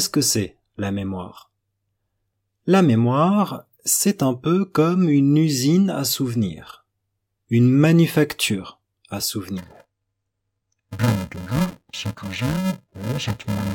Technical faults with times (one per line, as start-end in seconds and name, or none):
9.58-13.74 interleaved audio read as planar